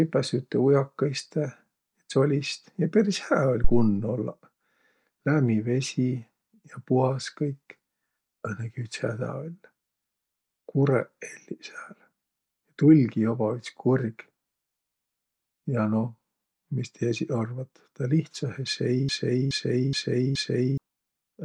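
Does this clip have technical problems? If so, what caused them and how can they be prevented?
Yes. A phantom power thump hits at 3.64 to 3.97 s: a supply switched on a live input sends a step through the coupling capacitors, which the waveform shows as a low-frequency swing decaying in about 73 ms, and the spectrogram as a dark band at the very bottom. Mute or pull down the channel before switching phantom power.

A broken-record loop runs from 19.09 to 20.78 s, where a 422 ms fragment repeats four times back to back. The waveform shows identical repeating blocks, and the spectrogram shows an exactly repeated pattern in place of the missing speech. This is likely a stalled player or stream resending its last buffer. Give the stream enough buffering and monitor for dropouts while recording.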